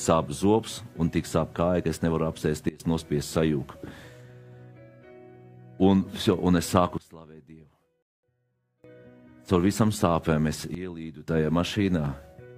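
Sudden gain jumps at 2.69–2.80 s, 6.98–8.84 s and 10.75–11.28 s drop the audio and its background noise together by about 21, 24 and 14 dB, likely from digital gain changes applied without a ramp. Dropped samples at 6.33 s and 12.06 s produce single sharp clicks, likely where a fraction of a millisecond of the stream went missing. A rebuffering stall from 8.02 to 8.23 s, inside the second quiet stretch, cuts the sound to silence for 210 ms, then resumes exactly where it stopped, adding time without losing any sound.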